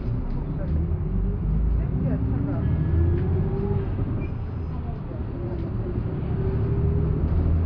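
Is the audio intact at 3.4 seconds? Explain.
Yes, at 3.4 seconds the sound is intact, with no dropout, click, distortion or other fault at that point.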